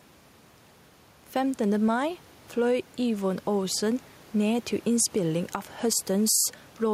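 Throughout the speech, the room noise sits about 31 dB below the talker, and the gain swings by around 5 dB under louder sounds. This is gain pumping, likely from input gain set far too high feeding a fast limiter.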